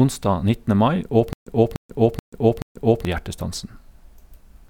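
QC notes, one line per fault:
1.33–3.05 s, stutter with silent gaps: the same 295 ms speech burst repeats four times with 134 ms of dead silence between, likely a stalled stream replaying its last chunk.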